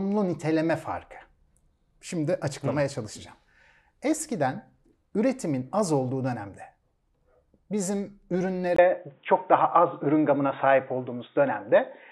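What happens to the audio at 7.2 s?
Nothing goes wrong at 7.2 s: the speech carries on intact through that moment, with no dropout, click or distortion.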